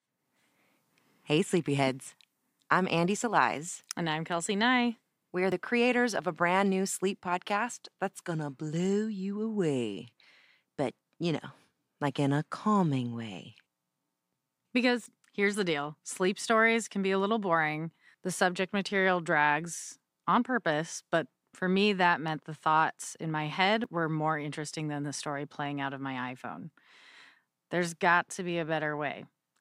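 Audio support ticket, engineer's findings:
Jumps ahead in the speech at 5.52 s (before "creators of a brand"), 15.06 s (before "here's the deal sleep", roughly 70 ms gone) and 23.84 s (between "thoughts in my head" and "were more interesting than", about 20 ms). Likely a dropped buffer (overrun) in capture, with unread samples overwritten. Audio is spliced with no gap, unlike an underrun's silence.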